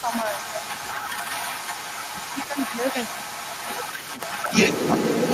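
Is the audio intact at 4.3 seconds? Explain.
No. Through the whole clip a delayed copy of the speech comes back, arriving about 236 ms after it at roughly the same level. This is echo leak, likely from a far-end loudspeaker whose echo canceller let its microphone pickup through and sent it back.

From 3.74 to 4.3 s the speech itself sinks by around 10 dB, so 4.3 s sits right at the end of that dip. This is speech suppressed in double talk, likely an echo canceller turning down both talker and echo while both sides overlapped.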